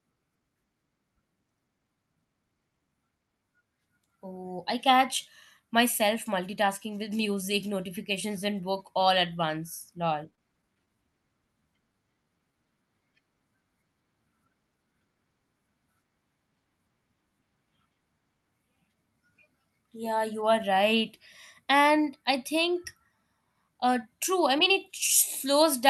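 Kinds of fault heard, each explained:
Repeated stalls (stutter): from 10.07 to 10.96 s, just after "at once", packets arrived late seven times; each short gap, none over 20 ms, was bridged by continuing the last sound, so the speech stutters without losing anything.
Jitter buffer slow-down: from 11.92 to 12.83 s the receiver repeated pitch periods to rebuild its reserve, adding 88 ms, so the speech drags to 91% speed at unchanged pitch.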